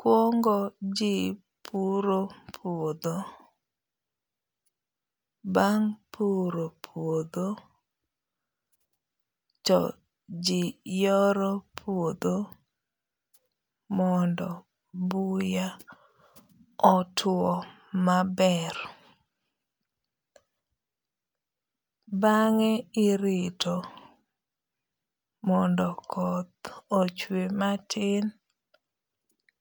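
No technical faults can be heard anywhere in this speech recording. There is no moment in it that calls for a timestamp or a closer look.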